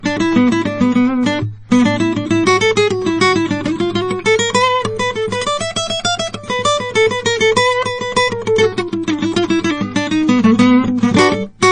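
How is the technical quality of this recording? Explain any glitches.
The quality is poor: MP3 compression damage is plainly audible throughout this music. Nothing sounds above 9.4 kHz, and the swirly, watery shimmer, not just dullness, points to a starved encoder, likely MP3 at around 32 kbps, dropping weak frequency lines that flicker frame to frame.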